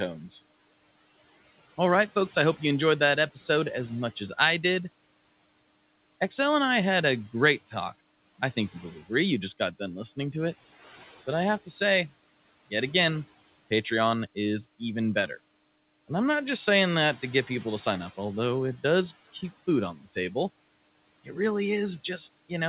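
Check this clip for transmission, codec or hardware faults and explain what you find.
One fault stands out: speech cut by the noise suppressor, between 19.95 and 20.15 s, just after "it does keep food". The suppressor mistook a soft stretch of speech for background and pulled its gain down by up to about 11 dB, affecting roughly a tenth of a second in total. The speech there comes across swallowed and faint. The room noise sits about 23 dB below the speech and belongs to the recording itself. The call path shows nothing above 4 kHz, the narrowband ceiling that fits G.711 A-law at 64 kbps.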